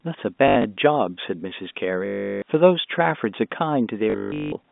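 Short robotic stutters with a 50 Hz buzz hit at 0.48–0.64 s, 2.06–2.42 s and 4.10–4.52 s. This is packet loss with the last packet repeated, a pattern that fits 20 ms packets, heard through narrowband telephone audio.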